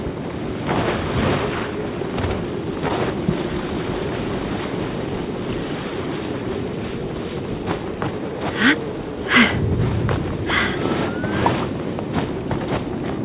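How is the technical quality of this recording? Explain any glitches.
The audio came over a narrowband call link, with nothing above 4 kHz, consistent with G.711 mu-law at 64 kbps. It carries one audible glitch.

From 2.88 to 2.91 s there is a short concealed packet loss. About 20 ms of audio failed to reach the decoder in time. The receiver covered roughly 11 ms of that gap by extending the preceding sound, pitched or noise-like as appropriate, then crossfaded back into the real signal. It comes across as a brief smear or wobble, and any very short transient in that window may be lost.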